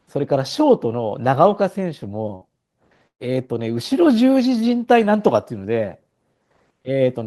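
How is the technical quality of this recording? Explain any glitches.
The speech is interrupted twice by a burst of packet loss, at 2.35 to 2.44 s and 3.07 to 3.22 s. Each time the receiver extends the last sound, about 60 ms and then about 114 ms, fading it out and, in the second gap, leaving some 80 ms of silence. On a spectrogram these show as the last sound smeared and held as it fades, tapering to a blank band in the second gap, and the waveform shows an abrupt jump when speech resumes with a portion missing.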